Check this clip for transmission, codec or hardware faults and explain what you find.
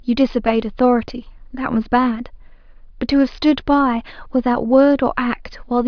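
Nothing to flag here: the speech comes across with no dropouts, glitches or other transmission or hardware trouble that I can hear.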